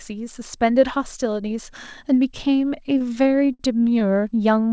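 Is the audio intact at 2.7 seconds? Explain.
No. At 2.7 seconds the speech drags and stutters: from 2.62 to 3.61 s it keeps catching on itself, with 12 brief holds where the last sound is stretched out, the longest 60 ms and softened as it fades. These repeated stalls (stutter) arise when packets arrive late, so the jitter buffer empties and the receiver fills each wait with the preceding sound, about 162 ms in all. Nothing is actually lost.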